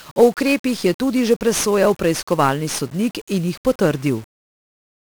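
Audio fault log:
Throughout: 1-bit DFPWM compression. Heavy damage across the whole speech clip. Each sample is a single bit that pushes an adaptive level up or down, so the signal is a coarse staircase that chases the speech and leaves dense broadband quantisation noise. The speech sounds fuzzy and crackly, with hiss burying the treble. The grain points to a 1-bit stream near 48 kbps. On a spectrogram a noise floor fills the whole band and hides the upper harmonics. The waveform looks jagged and stepped.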